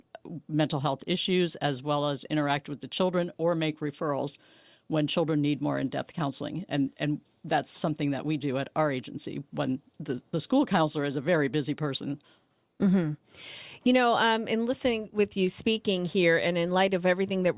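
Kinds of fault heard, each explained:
No technical faults can be heard in this speech recording. Nothing in the audio stands out as a defect to explain.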